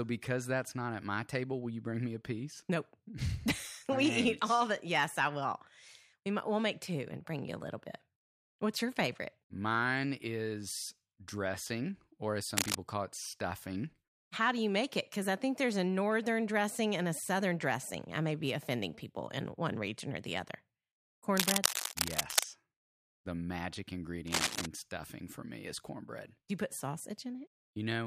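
Cable scratch noise breaks in three times: 12.57 to 12.75 s, between "is dressing or as" and "call it stuffing"; 21.37 to 22.44 s; and 24.27 to 24.66 s, just before "stuffing for me is". Each is a rough rustling scratch about as loud as the speech, likely from a worn cable or connector being moved.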